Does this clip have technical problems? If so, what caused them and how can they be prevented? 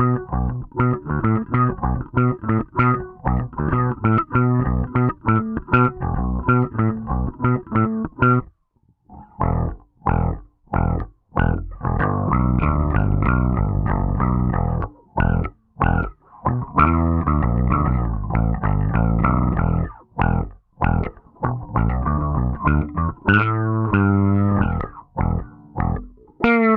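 No, this clip has no technical problems, so there is nothing to trace to a cause or prevent.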